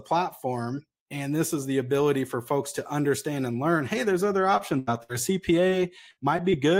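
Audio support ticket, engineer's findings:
Short concealed packet loss, four spots: 4.57–4.61 s right after "learn hey there's other", then 5.69–5.73 s, 6.37–6.40 s and 6.50–6.54 s. Each is about 20 ms of audio that never reached the decoder in time. The receiver's concealment patched it by extending the preceding sound for roughly 12–20 ms before crossfading back, so you hear a quick smear or wobble rather than a clean dropout. Network jitter or the jitter buffer is the suspect, not the capture side.

Burst of packet loss, three spots: 4.79–4.89 s, also following "learn hey there's other", then 5.03–5.11 s and 6.11–6.19 s. These gaps are bigger. The first is about 80 ms missing, the other two about 60 ms each. Concealment stretches the last bit of sound across the hole, so voiced parts turn into a short held buzz that fades and unvoiced parts into a dying hiss. Playback then resumes further along with that chunk gone. 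The clustering around 4.6–6.5 s points at a rough patch on the network path.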